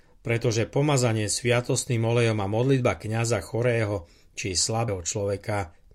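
At 4.88 s, just after "chorého či", the speech jumps forward, and around a tenth of a second of audio is simply gone. These are compressed frames skipped: a few whole frames of the encoded stream were missing or rejected by the decoder as damaged. The gap fits about three frames of 32 ms.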